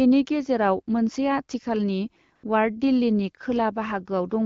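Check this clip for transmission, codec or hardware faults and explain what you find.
One transmission fault stands out: a burst of AMR comfort noise from 2.35 to 2.43 s. The sending phone's voice activity detection judged the talker silent for about 80 ms and stopped transmitting speech frames. The receiver filled that gap with synthetic noise built from a rough estimate of the background's level and spectrum. For that moment the real background sound gives way to a smooth, even hiss that switches in and then out abruptly. The surrounding wideband speech carries light codec colouring, consistent with AMR-WB at 12.65 kbit/s.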